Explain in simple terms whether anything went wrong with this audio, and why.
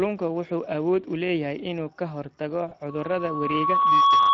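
Three things went wrong.

Throughout the clip the speech carries the sound of the Speex codec, an older compression method used in internet calls and game chat. It rebuilds speech from a simplified model of the voice with only a limited budget for detail, so the result is plainly rougher than the original: grainy and hoarse rather than clean. This damage is present from start to finish, not in any single moment.

Right after "leeyahay inuu ka hortago", from about 2.69 to 2.74 s, there is VoIP packet loss concealed by the speech codec. One small chunk of audio, about 20 ms worth, never arrived. The decoder covered the gap by continuing the last sound it had and letting it fade. This gives a brief smeared blip, and the speech takes a moment to sound right again afterwards.

From about 2.89 s to the end there is a loudspeaker feedback squeal. A microphone picked up a speaker that was playing its own signal, and the sound looped round and round, growing each time at one pitch, here about 1.1 kHz. 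The tone swells over roughly a second into a steady whistle that ends up clearly louder than the speech and lasts until the clip stops.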